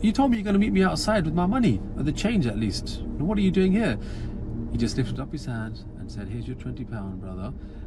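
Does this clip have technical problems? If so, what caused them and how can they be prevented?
Yes. One channel drops out, from 0.35 to 0.50 s and again from 5.16 s to the end: the level drops abruptly by about 6 dB and then recovers after the first brief dip, but not after the second. That drop is what a mono fold-down does when one side of a stereo pair is likely lost, so the shared content halves and anything unique to that side vanishes. Securing cables and monitoring both channels while recording would prevent it.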